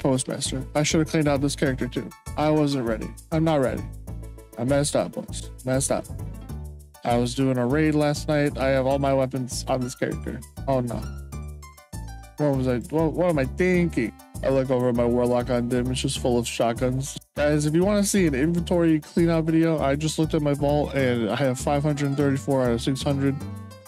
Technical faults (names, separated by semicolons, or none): none